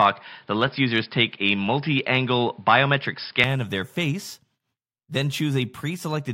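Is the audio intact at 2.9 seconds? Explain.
No, at 2.9 s the speech is still dull and boxy, with nothing above 5.3 kHz, a new noise floor and a level shift of about 5 dB, until it clears at 3.44 s, just before "of their face." That's likely an input switched to a poorer device, then back.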